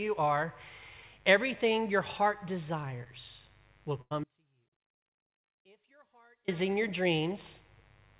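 A mains buzz runs through the whole clip, around 35 dB below the speech. Sharp switching spikes, twice in every 50 Hz cycle, leave a raspy rasp of harmonics.

From 4.01 to 4.13 s there is a burst of packet loss. About 100 ms never arrived. The receiver continued the last sound and faded it down, then jumped ahead.

From 4.24 to 6.48 s comes an audio dropout to a faint residue. The speech cuts off abruptly for 2.24 s. Only faint sound remains, about 35 dB down, likely from a signal break with the path still live.

All of this sits within narrowband call audio, with nothing above 4 kHz.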